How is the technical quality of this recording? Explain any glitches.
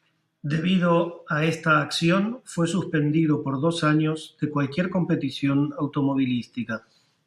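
Listening through the speech recording, nothing stood out as a glitch or technical problem.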